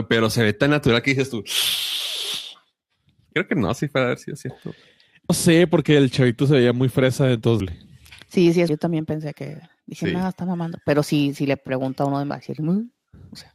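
Damaged data in a compressed stream causes brief blips at 5.30, 7.60, 8.69 and 12.30 s as the decoder misreads corrupt frames. It sounds like a chirp, squawk, click or short hole.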